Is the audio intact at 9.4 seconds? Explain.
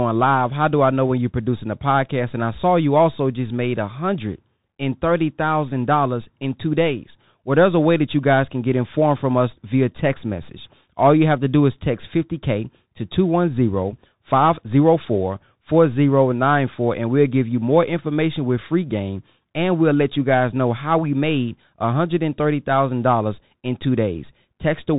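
No, the Bluetooth CVSD headset codec runs throughout, including 9.4 s. Its one-bit up-or-down steps, which fit a 64 kbps stream, cannot track fast loud changes, and nothing above 3.8 kHz survives, s sounds turn scratchy, and granular hiss sits beneath the speech.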